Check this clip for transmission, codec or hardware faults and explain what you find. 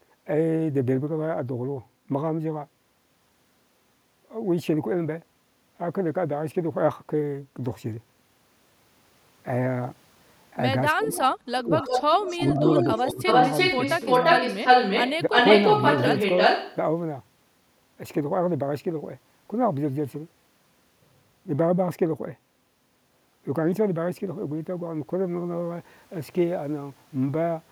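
Two faults show up in the middle of this speech clip, between about 10.9 and 16.8 s.

Speech suppressed in double talk occurs at 10.92–11.21 s, 11.61–11.74 s and 12.36–13.24 s. The voice dips sharply, by roughly 20 dB at first and by a smaller amount later. An echo canceller likely mistook overlapping talk for its own echo and turned everything down.

An echo leak runs from 11.79 to 12.51 s, from 12.68 to 15.12 s and from 15.3 to 16.76 s. A copy of the voice returns about 341–347 ms late. It is roughly as loud as the speech, then somewhat louder. A loudspeaker echo likely got past the far end's canceller and was sent back.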